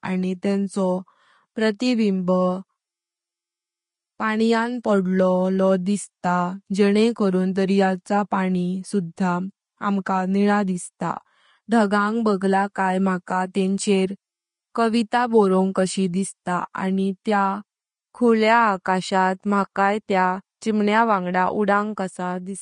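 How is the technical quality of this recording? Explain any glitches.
The recording has audible, steady codec damage across the whole clip, plus six brief pre-echo smears before sharp onsets.

Throughout, the speech sounds hissy and grainy, with a roughened tone and softened consonant attacks, and nothing reaches above about 10.5 kHz. This is Vorbis compression, likely at a low setting around 32 kbps. The encoder lowers its cut-off and quantises the remaining treble so coarsely that fine detail turns into noise of similar energy, which produces the grain.

Short pre-echoes occur at 4.83 s (after "अनुंक पाण्यां", before "पांढळो दिसता जेंने करण"), 8.05 s (after "पांढळो दिसता जेंने करण"), 12.40 s, 13.26 s, 16.73 s (after "कविता बोरंग कशी दिसता", before "आनी त्या") and 17.24 s. Each is a short hiss of about 11 to 13 ms just ahead of an attack that sounds blunted. The codec spreads noise sized for the loud onset across its whole block, so the quiet moment before the attack is filled too.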